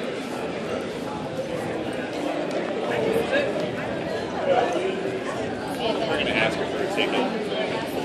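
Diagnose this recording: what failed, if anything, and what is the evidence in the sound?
Nothing in the recording points to a failure at any stage of the chain. No event in the sound calls for a diagnosis.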